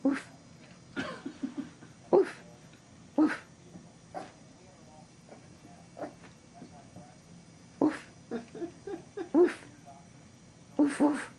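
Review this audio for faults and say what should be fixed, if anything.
No technical faults can be heard anywhere in the audio. Nothing needs to be fixed.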